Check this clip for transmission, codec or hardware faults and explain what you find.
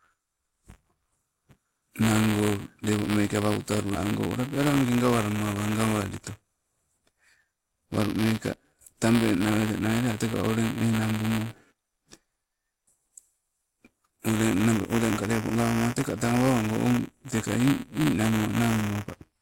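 There's one fault here, and it runs through the whole clip: buffer tearing. The writer and the hardware reader have drifted so they cross partway through every buffer, leaving a small slice, a few percent, holding audio from about 10 ms earlier with hard splices either side. You hear a steady robotic buzz at 172 Hz riding on the speech, which fits a 256-sample buffer, and it drops out in the pauses.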